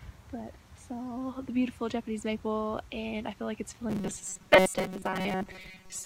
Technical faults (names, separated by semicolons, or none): robotic sound from repeated short buffers